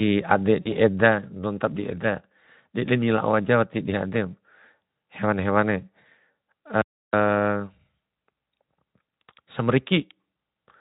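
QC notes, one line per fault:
0.62–0.73 s: VoIP packet loss concealed by the speech codec. About 40 ms lost, which fits two frames; the decoder extrapolates its last pitch and filter into a fading buzzy tone or coloured noise, then recovers.
6.82–7.13 s: audio dropout to silence. About 310 ms of silence with no room tone; the sound cuts out mid-flow, likely from the input being lost while recording continued.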